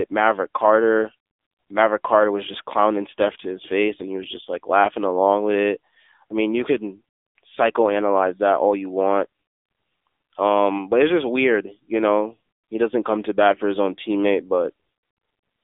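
AMR narrowband mobile codec coding runs throughout the speech. It holds the band to roughly 300 Hz to 3.6 kHz, with nothing above 3.7 kHz. The vocal-tract model, driven by sparse pulses, leaves a plainly audible buzzy, synthetic edge that points to a low 7.4 kbps mode.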